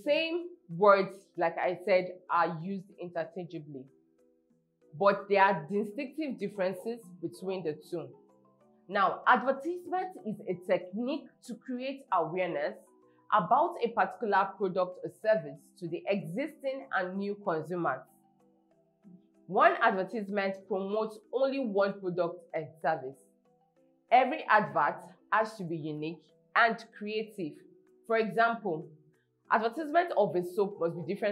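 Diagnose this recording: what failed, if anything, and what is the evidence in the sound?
Nothing in the signal chain has failed: the audio is continuous and level-stable throughout, with no audible disturbance traceable to the wiring, conversion, buffering, processing, transmission, storage or playback stages.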